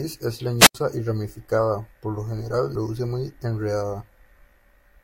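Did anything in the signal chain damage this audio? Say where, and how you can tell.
Yes. A wireless microphone squelch dropout occurs at 0.58 to 0.75 s. The radio signal fades, hiss rises, and squelch mutes 81 ms before "y ramificada por lo".

At 2.74 s, after "ramificada por lo general", damaged data in the compressed stream causes a short blip. The decoder misreads corrupt frames, then resyncs.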